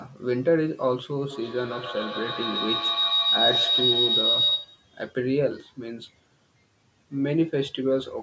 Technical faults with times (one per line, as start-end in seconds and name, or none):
1.30-4.94 feedback howl